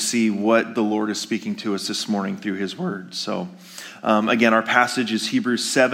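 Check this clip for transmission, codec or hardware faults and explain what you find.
Nothing in the clip points to a transmission, codec or hardware fault. It can be taken as it stands, with no fault to report.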